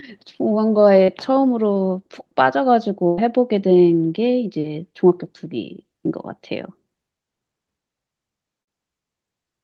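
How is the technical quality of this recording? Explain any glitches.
The recording has four dropouts from packet loss on the call link, two short and two longer, all in the speech carried over the call codec, whose top end stops near 12 kHz.

Short concealed packet loss at 1.03–1.10 s and 1.74–1.77 s: about 40 ms and 20 ms of audio failed to arrive in time, so the decoder extended the preceding sound and blended back. Each is heard as a brief smear or wobble, with a tiny fragment gone.

Burst of packet loss at 3.07–3.19 s and 8.61–8.69 s: roughly 100 ms and 60 ms went missing, longer than the receiver could bridge cleanly. It held the last sound while fading it, producing a short buzz or hiss, then the speech resumes with that stretch dropped.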